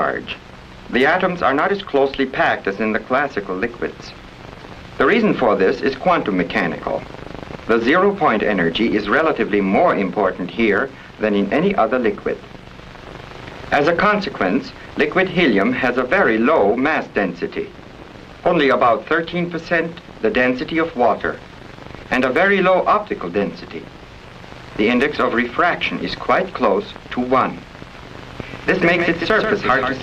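A doubled audio track appears at 28.17 s and runs to the end: a second, full-band copy trails the original by about 150 ms at roughly 5 dB lower, with no decay or room colour, and it cuts in abruptly. The likely cause is a slower second capture path or an edit holding two offset copies.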